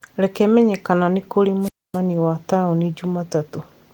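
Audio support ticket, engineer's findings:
Wireless microphone squelch dropout, 1.61–1.99 s. RF signal faded below the receiver's squelch threshold, so output muted for roughly 260 ms after "menye kana nĩ kũrĩ". Brief hiss rise, near-silent hole, speech resumes at "wa taũni". Opus hybrid path at 20 kbps, fullband, only lightly marked.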